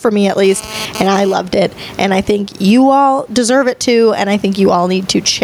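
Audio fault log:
Throughout: gain pumping. The level swings by roughly 20 dB, which squashes loud and soft passages toward one level. The likely cause is input gain set far too high with a fast limiter clamping it.
0.44 to 1.34 s: GSM phone buzz. A hard, raspy buzz at about 217 Hz, rich in harmonics and about 24 dB below the speech, cuts in and out independently of the talker. A nearby 2G handset's bursty data transmission is being rectified by the audio circuitry.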